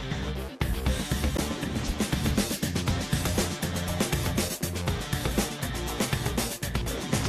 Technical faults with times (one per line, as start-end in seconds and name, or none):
1.37 gap between stream segments